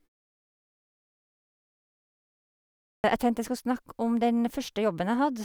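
At 2.91 s, after roughly 2.9 s of silence, the first sound arrives with a clipped start after a pause. About 130 ms of speech, up to 3.04 s, never reaches the listener. The output path had gone idle during the silence and was still waking when the sound resumed, so the first sounds are cut away and the speech begins abruptly. Muted pauses would only silence the gap, with the next sound arriving whole.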